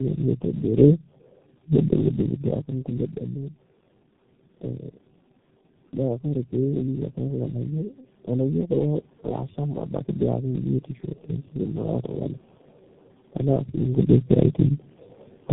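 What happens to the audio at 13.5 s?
Around 13.5 s the level shifts as the talker changes distance from the microphone, which is ordinary, not a system fault. The fault present at that moment runs through the whole clip: tandem speech coding. The roughness and warble point to three low-rate speech coders in series, likely G.729A twice and then G.723.1, with G.711 links between, each re-encoding the previous coder's already degraded output. The result sounds rougher and more muffled than a single coder, with nothing above 3.8 kHz.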